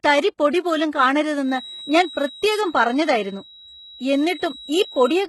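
From the start the speech carries heavy HE-AAC compression, likely at a very low bitrate such as 16 kbps. Its treble is rebuilt from copied lower bands and stops at 11.8 kHz, so s sounds come out gritty and metallic rather than simply dulled by a low-pass.

From 1.39 s to the end, a feedback whistle at 3.9 kHz sits well below the speech. It is likely a loudspeaker-to-microphone loop held just short of howling. Unlike a steady electrical tone, it swells and fades slowly without ever building up.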